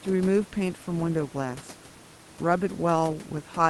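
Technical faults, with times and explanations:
The speech comes through the Opus call path with its high end stopping near 12 kHz and a room noise sitting about 25 dB below it, and no technical fault can be heard.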